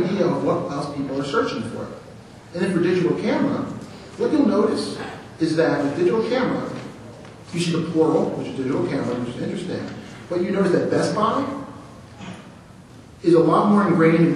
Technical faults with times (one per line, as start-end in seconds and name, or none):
none